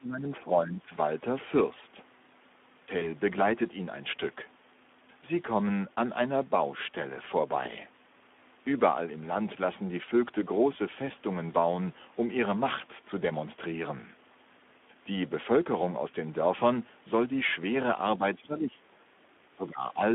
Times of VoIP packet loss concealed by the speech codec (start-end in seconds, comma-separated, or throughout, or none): 2.99-3.08, 7.63-7.71